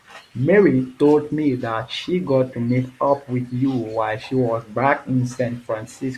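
Listening to this speech recording, nothing stood out as a technical problem at any point.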